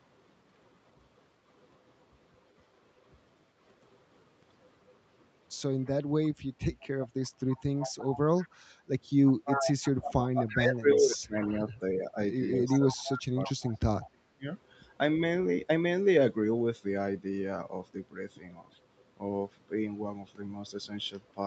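Echo leak runs through this speech clip at 5.85–5.9 s, 7.23–8.6 s, 9.24–11.53 s and 12.65–14.07 s as a copy of the far-end sound trailing about 337 ms behind, barely audible at first but nearly as loud as the talker around 9–11 s. This is likely a loudspeaker-to-microphone path that the echo canceller failed to fully cancel. Speech suppressed in double talk follows from 10.07 to 14.47 s: while the echo overlaps the talker, the near-end sound repeatedly dips, by as much as roughly 30 dB and for about 3 s in total, as the canceller likely turns everything down rather than separate the talker from the echo.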